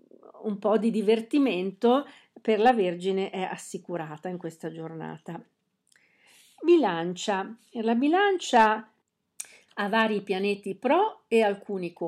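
Speech with hard clipping at 2.66–2.70 s after "po' di divertimento per", 8.56–8.67 s and 9.98–10.02 s, where peaks exceed the stage's limit by about 3, 4 and 1 dB. The waveform shows flattened tops, and the spectrogram shows brief high-frequency smears.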